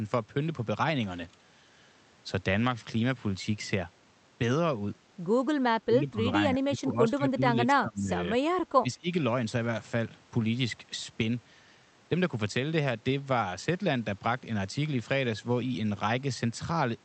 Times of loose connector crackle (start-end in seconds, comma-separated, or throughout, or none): none